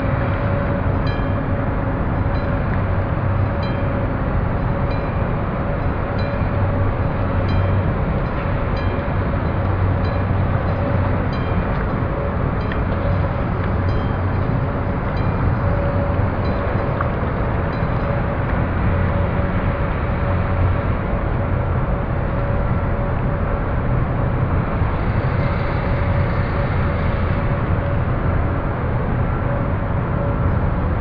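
Nothing goes wrong anywhere in the recording; there's no technical fault to point to at any moment.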